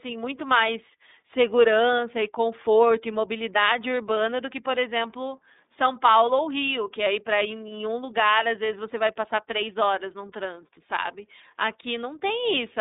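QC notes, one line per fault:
Throughout: iLBC codec. Speech is held to a telephone band of 200 Hz to 3.7 kHz. Coding each 30 ms frame independently, which fits the 13.33 kbps mode, leaves it plainly rough and synthetic. A spectrogram shows empty space above 3.8 kHz and below 200 Hz.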